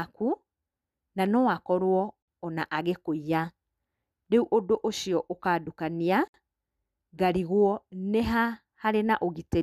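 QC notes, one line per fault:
2.22–2.28 s and 6.28–6.34 s: gap at a join of encoded pieces. Speech cuts to silence for 54 and 64 ms, then resumes. Separately encoded 4 s pieces were joined with their start delay and end padding left in.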